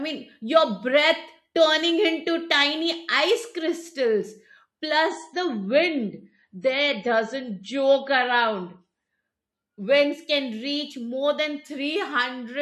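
From 5.09 s to 9.09 s the speech abruptly loses its top end, with nothing above about 10.4 kHz, and takes on a swirly, grainy coding texture before snapping back to its earlier quality, all without any gap. This four-second dip is an adaptive stream at a lower bitrate: the player briefly switched to a leaner encoding, which fits a drop from MP3 at 128 kbit/s to 32 kbit/s, and then returned.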